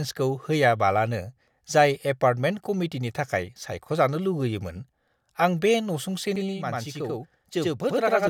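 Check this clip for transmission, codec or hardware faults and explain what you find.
One fault appears near the end of the speech. From 6.36 to 8.27 s, channel delay (doubling): one channel lags about 93 ms, which fits a 4096-sample buffer, then sums to mono, giving an equal-level slap echo. The waveform shows each onset repeated.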